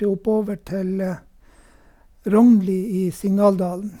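Nothing in the recording stood out as a technical problem on listening.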